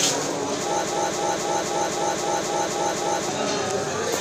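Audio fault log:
0.85 to 3.29 s, broken-record loop: a chunk of about 262 ms gets stuck and plays back to back nine times, each pass identical, so you hear the same little fragment stuttering for nearly two and a half seconds before things move on. Whatever should have played during that stretch is simply gone. The likely culprit is a stall in the player, encoder or stream that left it resending the last bit of audio it was holding.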